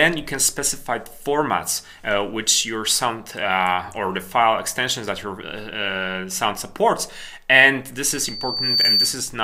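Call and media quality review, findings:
Loudspeaker feedback squeal, 8.08–9.28 s: single 4.6 kHz tone swelling over under a second to about 5 dB above the signal. Mic picking up its own loudspeaker, loop gain above one. Self-building onset separates it from a steady, fixed-level interference whistle.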